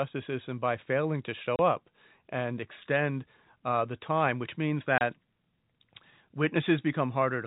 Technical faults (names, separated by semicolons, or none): packet loss filled with silence